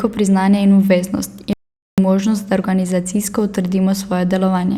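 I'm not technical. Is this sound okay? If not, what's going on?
No. From 1.53 to 1.98 s there's an audio dropout to silence: the speech vanishes into total silence, with no background hum, until "možnost da". That points to a likely brief loss of the input signal rather than a natural pause.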